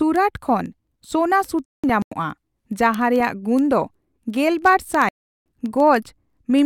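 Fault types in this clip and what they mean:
Word clock ticks: A steady patter of sharp ticks, about every 0.07 s, runs from 0.16 s to 6.59 s, roughly a hundred in all. The receiver's clock isn't locked to the sender's, drifting around 300 ppm, so it slips one sample at each tick.
Corrupt frame muted: The speech drops abruptly into dead silence from 1.67 to 2.12 s and again from 5.07 to 5.46 s, with the timing kept. Both gaps span several compressed frames that the decoder rejected as damaged, and the player filled each with silence.
Corrupt FLAC frame: A brief error at 3.20 s peaks around -16 dBFS before the audio comes back clean. Flipped bits in a FLAC frame went unchecked, so the decoder's prediction ran on wrong values until the next intact frame.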